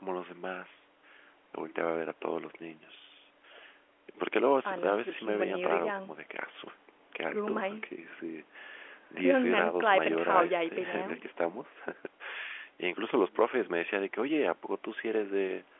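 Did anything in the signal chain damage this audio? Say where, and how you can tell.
No, nothing in the chain damaged this speech: the top ending near 3.7 kHz and the 300–3400 Hz line band are simply what G.711 A-law telephone coding at 64 kbps passes after the call's normal microphone processing.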